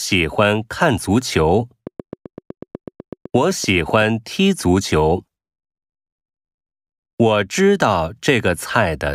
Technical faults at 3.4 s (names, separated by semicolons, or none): train of clicks